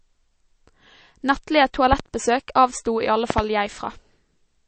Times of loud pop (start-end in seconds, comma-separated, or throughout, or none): 1.93-2.02, 3.30-3.41